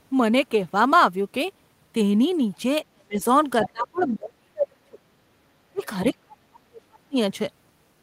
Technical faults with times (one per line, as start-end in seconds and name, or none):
2.92-3.20 speech suppressed in double talk
3.63-3.69 other side's voice leaking through
3.63-5.01 speech suppressed in double talk
3.98-4.15 other side's voice leaking through
5.72-5.83 speech suppressed in double talk
5.78-5.86 other side's voice leaking through
6.12-7.17 speech suppressed in double talk